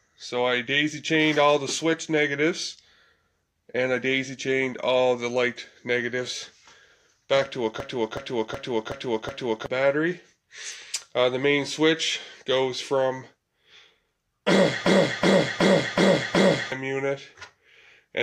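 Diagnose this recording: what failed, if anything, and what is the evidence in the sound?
System hang loop at 7.80–9.66 s and again at 14.86–16.72 s, a driver or buffer failure. Each time, one 0.37 s slice of sound repeats exactly five times, a stutter at about 2.7 Hz. The host stalled while the output hardware kept replaying its ring buffer, whose length fits a 16384-sample buffer. When playback resumes, about two seconds of sound are missing at each event.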